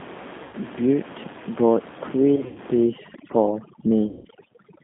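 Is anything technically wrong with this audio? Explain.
Yes. The whole recording has the slightly rough, synthetic, band-limited quality of the G.729 codec, with nothing much below 200 Hz or above 3.6 kHz. That sound fits G.729A at 8 kbit/s. The codec doesn't send the waveform. It rebuilds each 10 ms frame from a vocal tract filter, a pitch predictor and a handful of pulses, so fine detail and breathiness are replaced by an approximation, and the damage is plainly audible.

VoIP packet loss concealed by the speech codec appears three times. The first is at 0.43 to 0.55 s, with about 100 ms missing. The second is at 2.36 to 2.58 s, with about 120 ms lost in several gaps spread over 200 ms, the longest being 80 ms. The third is at 4.09 to 4.28 s, with about 160 ms lost. At each point the sound smears into a buzzy tone or coloured noise that fades instead of breaking off. The decoder is filling the gaps by repeating its last pitch and filter at falling gain. 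Because each frame depends on the previous one, the sound stays weak and distorted briefly after audio resumes.

Overdone noise removal runs from 2.84 s to the end at 4.83 s. The room noise sitting about 16 dB under the speech drops and breaks up into twinkling specks. A noise reducer set too aggressively is cutting individual frequency bands whenever they come near its noise estimate, and it takes quieter parts of the speech along with the noise.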